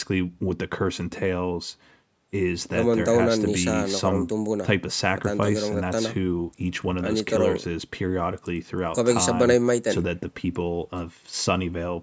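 Nothing stood out on listening to this speech, which shows the usual call microphone processing, with its band topping out around 8 kHz.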